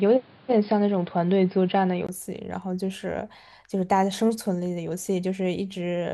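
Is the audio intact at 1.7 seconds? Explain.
No. From 0.0 to 2.09 s the input switched to a poorer device, likely a lower-grade microphone or headset path. At 1.7 s the speech is dull and boxy, with nothing above 5.1 kHz and faint added background noise. At 2.09 s a 20 ms gap leads to a fuller, roughly 5 dB different level.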